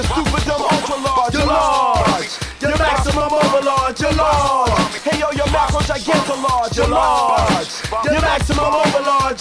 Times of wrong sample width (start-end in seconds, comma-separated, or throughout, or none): none